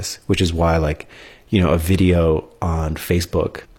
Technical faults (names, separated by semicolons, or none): damaged data in a compressed stream